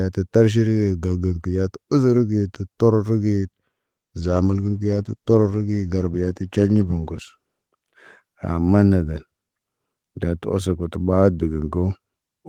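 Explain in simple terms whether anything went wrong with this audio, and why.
From 4.22 s to about 7.99 s, the speech turns rough and muffled. This is a call bitrate drop. The connection seemed to weaken, so the call sent far less detail and lost the crisp high sounds. It stayed at its worst for about three seconds before recovering.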